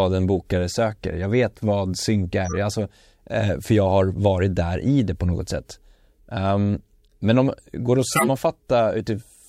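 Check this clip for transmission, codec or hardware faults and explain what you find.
Corrupt frame decoded, three times in this speech. Bits inside compressed frames were damaged, yet the decoder played those frames anyway, so misread gains and codes put energy at the wrong frequencies for the length of the damaged frames. From 2.45 to 2.56 s, after "jag vet vad synk", a couple of frames produce a fairly loud glitch. From 7.05 to 7.12 s, just before "men om går det", a few frames leave a faint glitch. From 8.11 to 8.27 s, after "om går det att", a few frames give a loud glitch.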